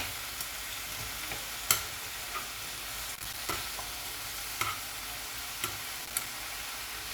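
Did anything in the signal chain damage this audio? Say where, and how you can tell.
Yes, in the analogue wiring. Loose connector crackle appears from 3.15 to 3.54 s and from 5.99 to 6.55 s as irregular scratchy bursts. A worn or dirty contact is intermittently making and breaking, chopping the signal and throwing pops from any DC on the line.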